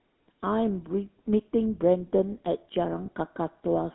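From the start the speech carries the buzzy, gravelly roughness of the GSM full-rate codec, which fits a 13 kbps stream. The voice is rebuilt from a vocal-tract model driven by coarse pulses, and the line band runs only from 200 Hz to 3.7 kHz, so it sounds thin and grainy throughout.

Then, from 3.06 to 3.08 s, there's a short patch of lost GSM frames, about one frame's worth. The decoder simply reuses the last good frame, so you get a brief rough, metallic smear instead of fresh sound.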